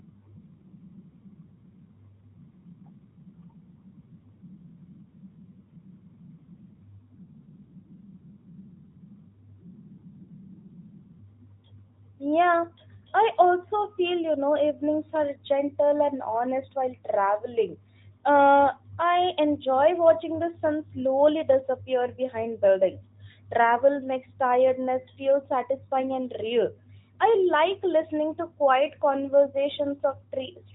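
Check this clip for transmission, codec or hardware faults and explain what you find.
No transmission, codec or hardware faults turn up in this speech, which carries the band-limited sound of a narrowband mobile link working as intended, consistent with AMR-NB at its top 12.2 kbps mode.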